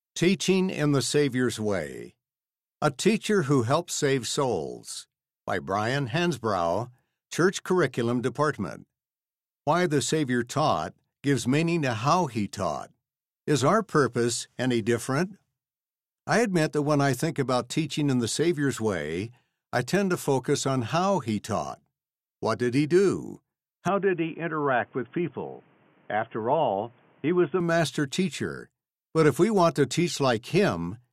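Input switched to a poorer device, from 23.88 s to 27.60 s of this speech clip. For those few seconds the sound turns dull and boxy, with nothing above 3.4 kHz and a faint new background noise about 35 dB below the voice, then clears again at 27.60 s. There is no gap at either switch and no real jump in level. The likely cause is the recording input moving to a narrower-band microphone or a headset's call profile and back.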